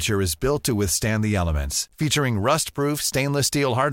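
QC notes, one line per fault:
Throughout: low bit depth without dither. The speech carries a grainy, rough texture that tracks the level of the voice, growing gritty on soft syllables and tails, where the quietest decays break up into sputter or drop out to silence. The error sits about 45 dB below the signal and is correlated with it rather than a steady hiss. This fits a 10-bit path, likely truncated with no dither to decorrelate the rounding error.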